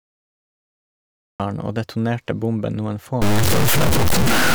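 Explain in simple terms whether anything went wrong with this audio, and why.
Yes, two things went wrong. First, a cut-off start: silence until 1.4 s, then the speech jumps in mid-sound, with no gradual fade-in like a natural quiet opening.

Second, from 3.22 s, right after "detonerte bomben noen", grainy distortion appears that rises and falls with the speech, unlike steady hiss. This is low bit depth without dither, likely from truncation to about 3 bits.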